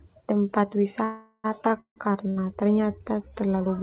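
A call audio freeze interrupts this speech clip at 1.04 to 1.46 s and again at 1.80 to 1.98 s. The last sound is held as a fading buzz or hiss, ending in brief silence, before the audio resumes where it stopped. The likely cause is delayed packets draining the jitter buffer. A short stall from a late packet follows at 2.30 to 2.38 s: the receiver stretches the last sound for about 62 ms until the packet arrives, leaving a slight buzz or dip and nothing missing. The audio stops at 4 kHz, consistent with a narrowband call codec such as G.711.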